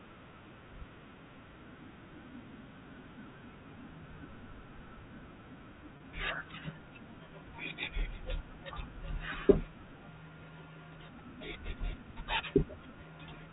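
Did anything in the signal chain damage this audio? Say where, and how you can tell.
Yes, network packet loss with pitch repetition at 5.97 to 6.00 s. The receiver looped the last pitch period across the 30 ms gap, producing a brief buzzy hold.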